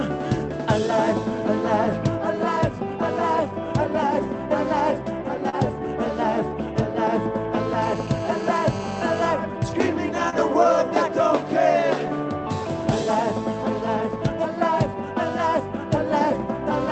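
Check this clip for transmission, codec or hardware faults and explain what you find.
Three faults are audible: two short concealed packet losses and a burst of GSM phone buzz, all on audio that has passed through a band-limited call codec.

At 5.49 to 5.55 s and again at 10.30 to 10.34 s, short concealed packet loss is audible. Late packets were bridged by extending the preceding sound, giving a brief smear or wobble. This differs from a dropout, which would leave a silent gap.

From 7.82 to 9.28 s, GSM phone buzz is audible. A nearby phone's 217 Hz transmit bursts were rectified into a raspy, harmonic-rich buzz at about 14 dB below the signal. It stays nearly steady, unlike the smooth 50 or 60 Hz tone of mains hum.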